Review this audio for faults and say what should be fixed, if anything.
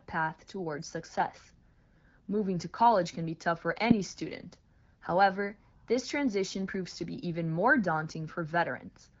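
Nothing stood out on listening, so there is nothing here that needs fixing.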